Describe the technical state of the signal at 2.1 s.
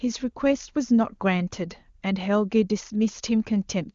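At 2.1 s the speech comes through intact, carried by the AMR wideband (HD Voice) codec at 23.85 kbit/s, a rate high enough that any coding damage is faint at most.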